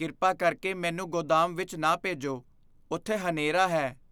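Nothing in this recording trips up the ear at any point, so there's no fault here to walk through.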